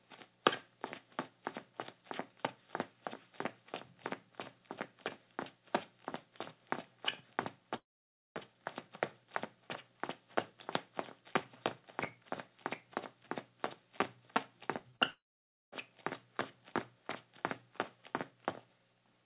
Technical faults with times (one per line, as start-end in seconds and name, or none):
7.76-8.37 long network dropout
14.79-15.01 short concealed packet loss
15.11-15.74 long network dropout